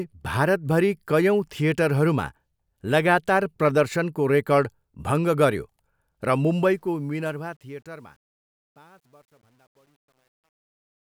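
A speech clip whose fade stage keeps too few bits, which points to roughly 10, and adds no dither, causing truncation distortion on a fade from 6.52 s to 11.07 s. As the fade-out starting around 6.5 s drops, the signal turns gritty, and from 7.8 s to the end it is at its worst.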